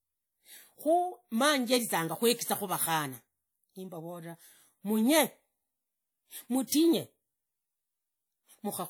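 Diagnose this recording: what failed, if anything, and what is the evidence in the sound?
The codec stage failed to contain its quantisation noise: a transform block spread noise across the quiet gap ahead of a sharp speech onset. This pre-echo is audible from 6.67 to 6.72 s as a short hiss about 50 ms before the attack, which sounds softened and smeared.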